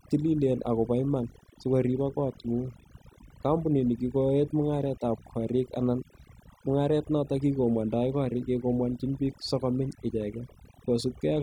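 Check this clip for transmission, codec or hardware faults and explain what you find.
Overdone noise removal runs throughout the speech. A noise reducer set far too aggressively cuts individual frequency bands whenever they sit close to its noise estimate, taking the quieter parts of the voice with them. The background drops and breaks up into twinkling specks.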